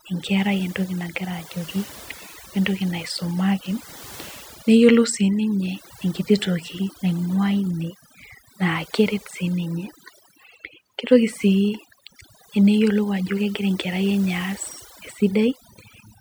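From start to finish the speech carries overdone noise removal. A noise reducer was driven too hard, so any frequency band sitting close to its noise estimate is pulled far down or switched off entirely. The low-level detail of the voice falls below that threshold and is stripped along with the noise. Between phrases the background drops to near silence dotted with twinkling specks.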